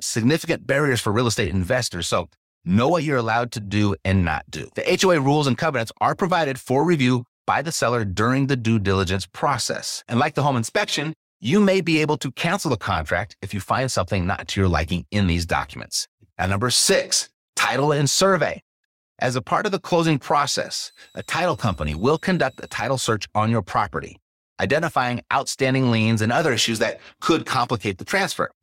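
A switching supply whistle runs from 20.30 to 22.84 s in this speech clip, starting just after "part of the closing" and ending before "search on your property". It is a thin high tone near 4 kHz, wandering between about 3.77 and 4.16 kHz, sitting roughly 35 dB below the speech. A switch-mode power supply dropping into an audible burst mode, or beating against another supply, produces this, its pitch shifting as the load varies.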